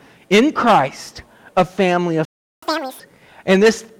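The player most likely ran dry of buffered data, or its output thread was held up, and at 2.25 s it produces a playback stall: the sound cuts out mid-flow and the output falls silent for about 0.37 s, until 2.62 s. The gap is abrupt rather than faded, a clean hole in the audio that interrupts its continuity before anything resumes.

Having fallen behind, the player then tries to recover the lost time by resampling its backlog, which gives catch-up at higher speed from 2.62 s to 3.0 s. Playback runs at twice normal speed, so everything is compressed in time and lifted in pitch by roughly ten semitones, giving a hurried, chipmunk-like quality. At 3.0 s the rate drops back to normal and pitch returns to where it was.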